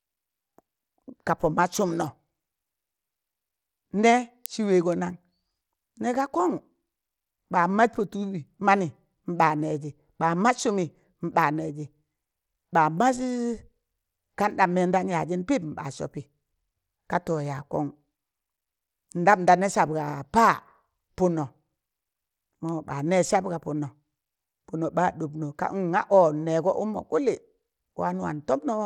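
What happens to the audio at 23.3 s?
At 23.33 s a bit error spike occurs. A single bit flipped somewhere in memory or on a digital link, corrupting the stored value so the waveform leaps by a power of two and snaps straight back. The disturbance is so brief that it points to about two adjacent samples. It is heard as one sharp tick, spread across the whole spectrum and unrelated to the surrounding sound, just before "sab ga punno".

Underneath that moment, as throughout the clip, the audio carries damage that is most likely from Bluetooth SBC compression. The encoder splits the signal into a few wide sub-bands and allocates bits crudely, with no model of hearing. The sound fits a low bitrate near 96 kbps, where the quieter upper bands are starved and the rest coarsely quantised. Nothing remains above 17.2 kHz, and a plainly audible gritty, aliased texture rides on the sound.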